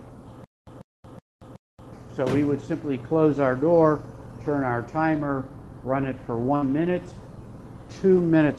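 The audio comes through a call path, with the top end rolled off around 12 kHz as an Opus-style call codec would do. Between 0.44 and 1.93 s there's a stutter with silent gaps: a 142 ms chunk repeats four times, each followed by about 230 ms of dead silence, a 372 ms cycle. That's likely the player stalling and replaying its last fragment on each retry, so whatever belonged in that stretch is gone. At 6.55 to 6.65 s there's a burst of packet loss. For about 62 ms the receiver stretches the last sound and fades it out, then jumps ahead, skipping roughly 60 ms of audio.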